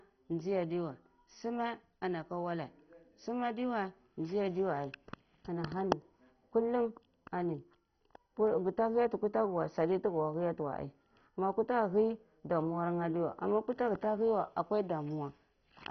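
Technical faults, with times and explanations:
Throughout, MP2 compression: the speech sounds dull and muffled, with nothing above about 6.1 kHz, and carries a heavy gurgling, granular roughness. This is likely MPEG Layer II coding at a very low rate, consistent with around 32 kbps. With so few bits to share across its 32 sub-bands, the encoder switches off the upper bands entirely and quantises the remaining ones coarsely, so they flicker on and off and leave that bubbly distortion.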